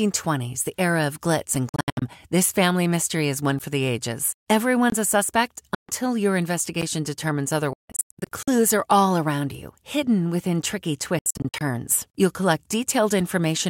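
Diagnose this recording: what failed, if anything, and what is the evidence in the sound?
Driver or buffer stage: a block of digital silence occurs four times. The first is a 3.5 ms hole at 1.55 s, right after "the era of glitz". Further holes fall at 3.59 s and 6.82 s, each about 11.6 ms long, and from 4.90 to 4.92 s for about 23 ms. Each one cuts straight to silence and back with no fade. The 11.6 ms and 23 ms lengths fit 512- and 1024-sample buffers that were not filled in time.

Playback over the wireless link: the speech breaks up in four clusters, likely a Bluetooth dropout where packets missed their deadline. From 1.69 to 2.02 s, about 232 ms is lost in holes scattered over 325 ms, the longest about 70 ms. After "a suspect", 5.75 to 5.89 s loses about 139 ms. From 7.73 to 8.48 s, just before "are all around you", about 464 ms is lost, with one run of 163 ms. From 11.19 to 11.61 s, about 232 ms is lost. 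Speech resumes as though it had kept playing.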